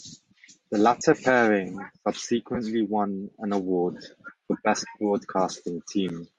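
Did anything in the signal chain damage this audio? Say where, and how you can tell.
Yes. Bluetooth LC3 compression runs throughout the clip, at the codec stage. Speech carries a breathy, grainy edge with noise-filled highs, likely from low-rate LE Audio coding.

Lost LE Audio frames occur at the network link, at 0.99–1.01 s and 2.55–2.57 s before "won an award for". The decoder concealed each gap by reusing the last spectrum with random signs.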